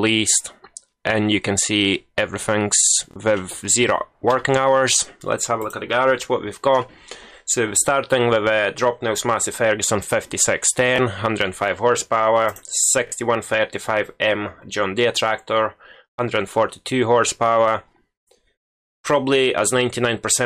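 At 3.11, 10.96 and 13.07 s, repeated buffer: late audio made the device replay its last 23 ms block, which fits a 1024-sample buffer. The result is brief hard-edged stutters.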